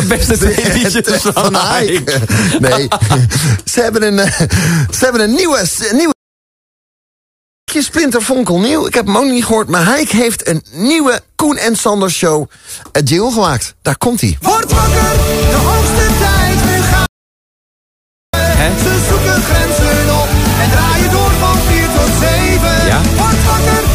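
Playback stall at 6.12 s and again at 17.06 s: the sound stops dead in mid-flow, leaving about 1.56 s of silence the first time and about 1.27 s the second, before it picks up again at 7.68 s and 18.34 s. The likely cause is the player running short of data or having its output thread blocked, so nothing reached the output until it recovered and resumed.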